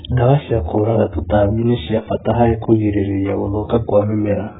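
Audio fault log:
Throughout, AAC compression: speech is dull and warbly, with nothing above 3.7 kHz, likely from heavy AAC-LC coding at around 8 kbps.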